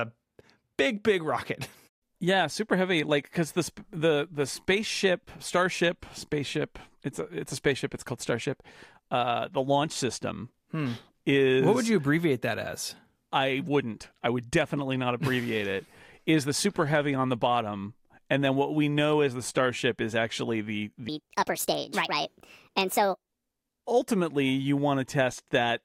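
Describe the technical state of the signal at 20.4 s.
At 20.4 s the speech signal is intact, with no audible technical fault at that moment.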